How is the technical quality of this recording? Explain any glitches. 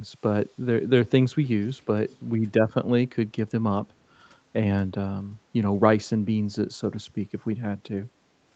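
One glitch stands out, a brief echo leak between 2.08 and 2.19 s. A very faint delayed copy of the speech, trailing about 0.34 s behind, surfaces for roughly a tenth of a second. The likely cause is a far end on loudspeaker whose echo canceller let some residue slip back. On a spectrogram it appears as weak harmonics repeating earlier energy, within a band that ends near 8 kHz, and it is barely visible on the waveform.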